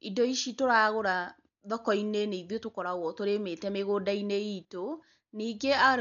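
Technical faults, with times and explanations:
Throughout: likely Dolby Digital compression. Dull speech, nothing above 6.9 kHz, and rough fluttering noise filling tones, unlike a clean low-pass. This fits a 48 kbps stream.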